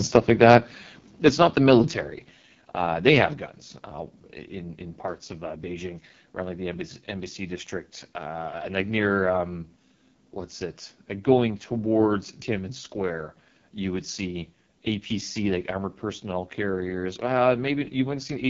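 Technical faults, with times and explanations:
Throughout: AMR wideband (HD Voice) codec. The speech is coded at 6.6 kbit/s, the lowest rate this codec offers, so it sounds rough and raspy throughout. The vocal tract model and pulse excitation cannot follow the voice closely at that bitrate. Nothing sounds above 7 kHz, and the top band from 6.4 to 7 kHz is synthetic noise. This differs from clipping because the roughness is constant, not tied to loud peaks.
1.26–1.28 s and 1.70–1.72 s: microphone overload. Brief harsh crackles sit on the loudest moments, the first just before "not the" and the second just after it. The likely cause is an input level high enough that peaks hit the converter's ceiling, about 2 dB over in the first case and right at the limit in the second. Their tops are sliced flat. Unlike codec roughness, the distortion appears only on these short peaks.
1.29 s and 2.31 s: microphone volume stepped down. 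The voice and background both drop abruptly, by about 5 dB each time. The first drop comes immediately after the first crackle, just before "not the". The likely cause is call software reacting to the overload by lowering the device's input gain in single steps. This is a sudden level change with no distortion of its own, unlike the clipping it follows.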